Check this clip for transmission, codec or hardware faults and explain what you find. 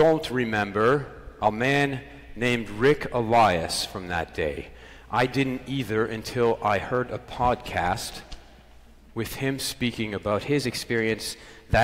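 One fault shows up, right near the end. From 10.31 to 11.76 s there's a drift correction step: the sound suddenly runs 5.83% fast and goes sharp by 98 cents, close to a full semitone, then snaps back. It's likely a clock-matching resampler changing its playback rate in a single jump to rebalance its buffer, so speed and pitch shift together.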